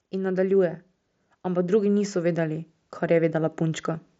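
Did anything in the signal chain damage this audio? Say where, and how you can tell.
Yes, automatic gain rising in call processing: from 0.11 to 0.85 s (about 4 dB) and 1.46 to 3.91 s (about 6 dB), speech and background swell together, so the waveform envelope and noise floor widen gradually.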